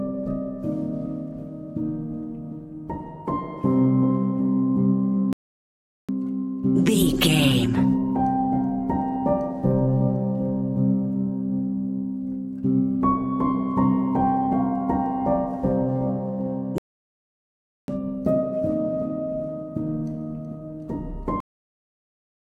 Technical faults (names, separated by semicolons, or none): playback stall; cut-off end